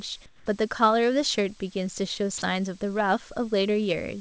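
From 0.26 to 0.46 s, the real background, about 28 dB below the loud parts, gives way to comfort noise in place of the background, likely from discontinuous transmission. It sounds steady, featureless and about 6 dB quieter. A spectrogram shows smooth, textureless noise; the waveform shows a flatter, lower envelope.

At 2.38 to 2.42 s, 40 ms of sound is dropped by the voice detector and replaced by steady noise, likely because the detector misjudged that moment as background. A waveform shows a short notch; a spectrogram shows a brief uniform patch, capped like everything else at 8 kHz.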